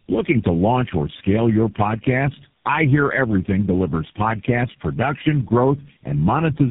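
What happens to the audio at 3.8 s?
Tandem speech coding, present throughout: four successive speech codecs recode the speech, so with nothing above 3.7 kHz it sounds muffled, rough and warbly, worse than any single codec would.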